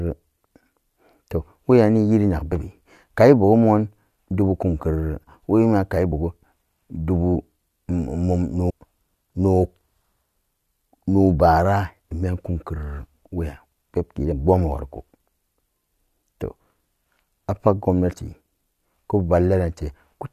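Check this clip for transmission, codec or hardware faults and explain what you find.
Yes, there is one kind of fault: compressed frames skipped, five times. At 2.51 s, 6.11 s (just after "budu kumkerere wemiyan kai"), 7.34 s, 8.69 to 8.71 s and 14.31 to 14.33 s, the speech jumps forward with a short smeared blip. The jumps lose about 50 ms, 20 ms, 50 ms, 400 ms and 50 ms of audio. Whole frames of about 23.2 ms were dropped or rejected as damaged, and overlapping neighbours blur each join.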